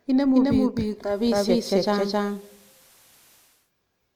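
A second capture path, likely a slower route feeding the same speech back into the mix, produces a doubled audio track that runs through the whole clip. A full-band copy trails the original by roughly 300 ms at about the same loudness, so every syllable is followed by a dry, equally strong repeat with no decay or room colour. The speech sounds stuttered and cluttered rather than reverberant.

At 0.92 s the receiver loses its digital signal and shows digital radio blending to analogue, cross-fading over 368 ms to the station's FM broadcast until it returns to digital at 3.72 s. During that stretch hiss rises to roughly 35 dB below the speech, and the level shifts by about 3 dB at each blend.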